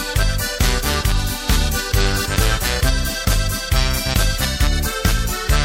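No technical faults can be heard anywhere in the signal, which holds steady and continuous across its whole duration.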